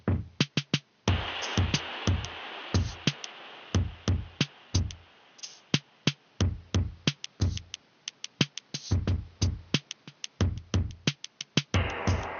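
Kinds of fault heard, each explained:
No technical faults can be heard anywhere in the audio.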